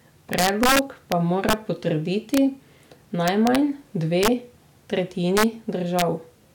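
Violent, sharp cracks, harsher than ordinary clipping, break through the loudest moments of this speech clip at 0.33–1.12 s, 1.49–1.53 s, 2.34–2.38 s, 3.28–3.56 s, 4.23–4.28 s, 5.37–5.44 s and 5.99–6.02 s. This is integer overflow. Peaks driven up to about 4 dB past the integer limit wrap around to the opposite sign instead of being held at the limit.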